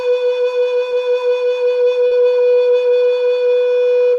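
A piece of music with two brief smeared wobbles, at 0.89 to 0.93 s and 2.07 to 2.13 s, from short concealed packet loss: about 20 ms and then 40 ms of audio arrived too late, and the receiver extended the preceding sound before blending back.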